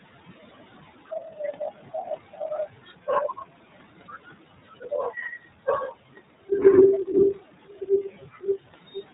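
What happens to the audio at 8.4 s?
Between 8.09 and 8.44 s the speech turns faint and swallowed, dipping by about 13 dB over roughly 150 ms in total. This is speech cut by the noise suppressor: it mistook parts of the speech for steady background noise and turned them down with it.

Around that same moment, the leftover background sinks between the words and rises under them. These are noise suppressor artifacts, from frame-by-frame band gains pulling steady noise down by about 15 dB.

The audio is also band-limited, with nothing above 4 kHz, and it has a rough, somewhat synthetic edge. That character is the iLBC codec, coding each 30 ms frame independently at a low bitrate that fits its 13.33 kbps mode.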